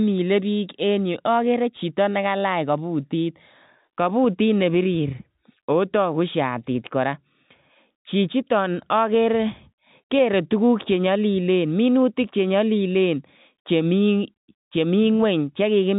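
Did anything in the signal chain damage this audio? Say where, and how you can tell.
No, the speech sits intact within the G.711 telephone band that the chain carries, with nothing above about 3.8 kHz, and no stage of the chain leaves a mark on it beyond that band limit.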